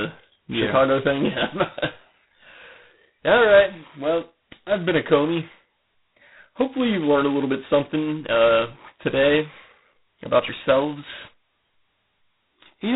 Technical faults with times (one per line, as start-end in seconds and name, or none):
0.00-12.95 G.726 ADPCM